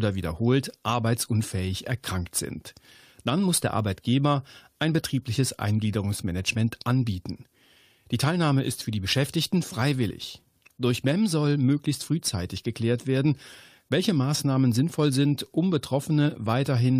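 At 10.09 s and 13.46 s, damaged data in a compressed stream breaks decoding. The decoder loses frame sync briefly, producing short glitches in the speech.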